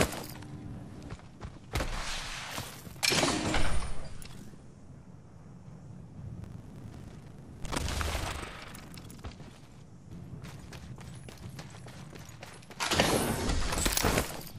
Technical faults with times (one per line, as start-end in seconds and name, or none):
6.40-9.25 buffer tearing